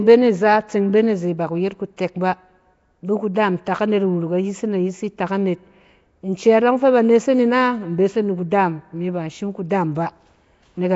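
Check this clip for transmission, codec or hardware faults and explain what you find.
One fault is present throughout the clip: Nellymoser compression, with plainly audible codec damage from start to finish.

The likely cause is Flash's Nellymoser Asao codec, at a rate consistent with 32 kbps. It codes 256-sample blocks at a fixed two bits per sample, so quiet bands receive no bits and are refilled with noise. The speech sounds gritty, hiss-fringed and blurred, as if submerged. A spectrogram would show nothing above 7.7 kHz and grainy noise filling the gaps between harmonics.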